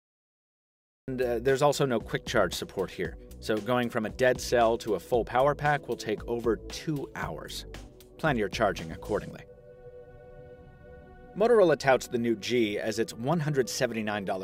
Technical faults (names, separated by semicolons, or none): cut-off start